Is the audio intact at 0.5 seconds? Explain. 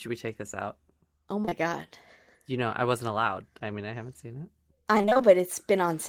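Yes, the speech at 0.5 seconds is intact, with no audible fault at that moment.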